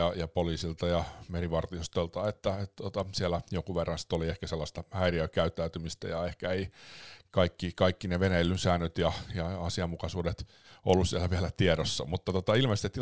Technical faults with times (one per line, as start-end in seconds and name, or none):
0.00-13.02 resampler restarted on every block